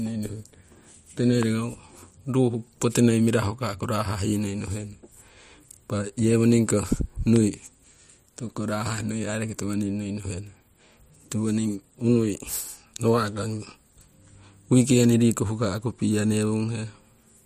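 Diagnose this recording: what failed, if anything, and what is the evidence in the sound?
Loud pops at 1.43 s and 7.36 s: single waveform spikes roughly 10 dB over the speech and thin vertical broadband spectrogram lines, likely an analogue-wiring voltage step.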